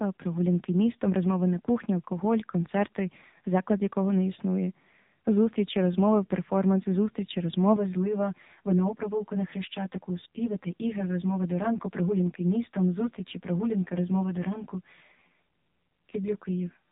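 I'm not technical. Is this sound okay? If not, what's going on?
No. The whole recording has been through an AMR narrowband mobile codec, the old phone-call format, so everything above 3.8 kHz is missing and the voice sounds buzzy and synthetic. From 7.76 s to the end there is also channel delay with comb filtering: one side arrives about 10 ms late and mixes with the other, making the sound rough or slightly doubled.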